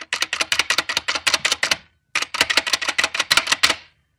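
Hard clipping runs throughout: the sound is driven about 7 dB beyond what a stage can pass, so its loudest peaks, well under one percent of samples, are cut flat, adding high harmonics heard as crackle on those peaks.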